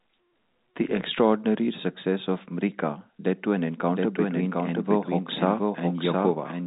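A speech recording carried over a G.711 telephone path, band-limited to 3.8 kHz, picks up a doubled audio track at 3.90 s that lasts to the end: a second, full-band copy of the speech trails the original by roughly 0.7 s, only about 5 dB quieter, with no decay or room colour and an abrupt entry. The likely cause is the same audio being captured again through a slower route, or an edit leaving two copies out of step.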